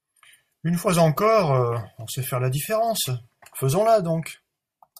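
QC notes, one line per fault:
Nothing to flag here, just speech with no faults to note.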